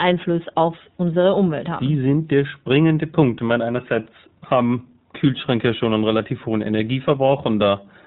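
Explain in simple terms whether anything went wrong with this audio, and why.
Two things went wrong. The whole recording has passed through the iLBC codec, a telephone-grade voice compressor. It keeps only the lower part of the sound, nothing above 4 kHz, so the speech sounds narrow, like a phone call, and the compression damage is plainly audible as a slightly rough, synthetic edge. What sets it apart from simple muffling is that the roughness is built into every sound, not just a loss of brightness.

Near the end, from 7.26 to 7.29 s, there is a very short gap from lost iLBC frames: one packet of sound, about 20 ms, never arrived. The decoder covered it by briefly repeating the last bit of sound with a little noise, giving a tiny buzzy hold rather than silence or a click. Unlike a dropout, there is no hole, and the sound is correct again almost immediately.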